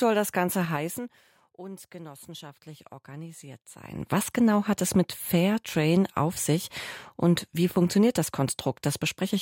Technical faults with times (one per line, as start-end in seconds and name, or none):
0.60-1.28 zipper noise
3.75-4.10 zipper noise